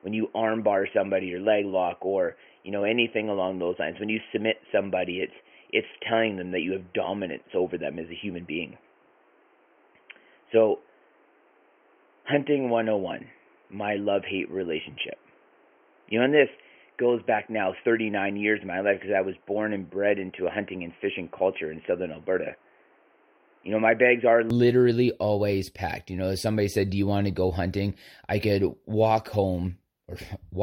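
From 0.0 to 24.50 s the speech is band-limited, with nothing above 3.2 kHz. It sounds dull and boxy over a faint noise floor. Then it clears, with no gap or level jump. The likely cause is an input switched to a poorer device.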